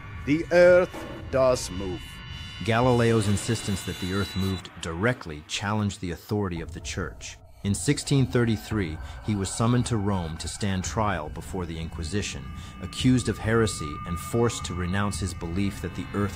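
Listening through the recording, nothing stood out as a technical problem at any point.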